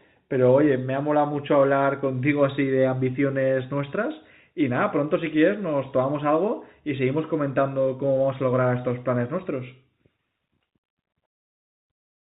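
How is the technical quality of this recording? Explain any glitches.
No glitches to report: the speech arrives over a telephone-band call path, with nothing above 4 kHz, consistent with G.711 mu-law coding.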